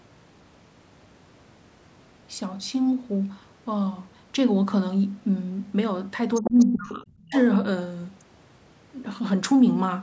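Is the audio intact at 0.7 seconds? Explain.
Yes, the speech at 0.7 seconds is intact, with only the normal band-limiting of call microphone processing, which leaves nothing above 8 kHz.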